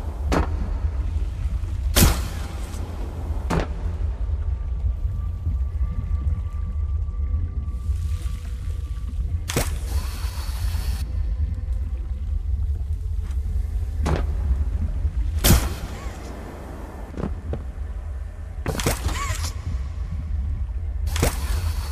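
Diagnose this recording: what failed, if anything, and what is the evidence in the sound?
The codec stage failed. At 8.51 s there is a brief smeared blip where the sound jumps forward. It is soft, not a hard click. This is compressed frames skipped: about one whole frame was never decoded, either missing from the file or rejected as damaged. The frame length is 26.1 ms, so roughly 30 ms of audio is lost. Neighbouring frames overlap, so the join blurs instead of snapping.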